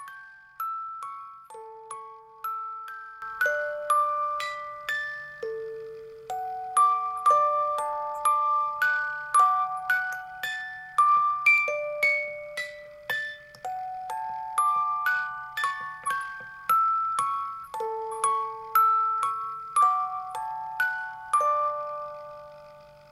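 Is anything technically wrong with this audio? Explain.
Yes. At 3.22 s there is a sudden gain jump: the level rises by about 12 dB in a single step and stays there to the end of the clip. The likely cause is a digital gain setting applied instantly rather than ramped in. What separates this from a genuinely louder event in the audio, or from automatic gain control, is that the background noise floor jumps by the same amount at the same instant, with no gradual attack or recovery.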